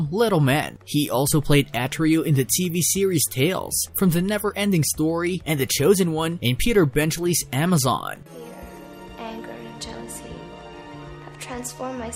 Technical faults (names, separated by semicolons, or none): none